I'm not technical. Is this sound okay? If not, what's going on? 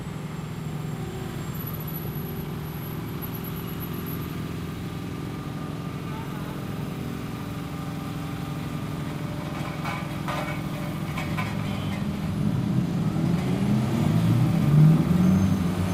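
No, there are two problems. At about 2.05 s there is a skip ahead: roughly four-tenths of a second of sound is simply missing, and playback jumps straight to what came later with no gap in between. That is what separates it from a dropout, where you would hear a silent hole or a stutter. Here nothing is filled in, so the sound just lurches forward, as if a small piece had been snipped out and the ends pressed together.

From about 14.39 s to 15.56 s there is a jitter buffer speed-up. The receiving system had stored more sound than it wanted, so it trimmed many tiny slices to catch up, about a tenth of a second in total. The sound runs at about 106% speed, which is enough to make it feel hurried. Unlike a sped-up recording, the pitch stays the same, so it doesn't turn higher or squeaky. It just moves faster.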